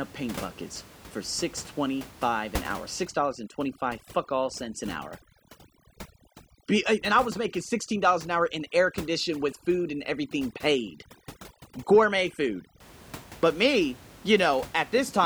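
Overdone noise removal runs from 3.05 to 12.80 s, starting right after "twenty five an hour". A noise reducer set too aggressively pulls individual frequency bands down wherever they sit close to its noise estimate. The background drops and breaks up into twinkling specks, and the quieter parts of the speech are stripped away.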